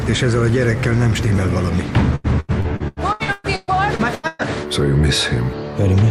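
Repeated packet loss (robotic sound) runs from 2.15 to 4.42 s. About a dozen short dropouts follow one another through that stretch, the longest about 118 ms. Each hole is filled by stretching the last sound forward, and the next hole arrives soon after. Around 40 percent of the span is this patched-in sound, close to a second in total. The result is choppy, with pieces of the audio missing. Packets arriving late or not at all is the cause.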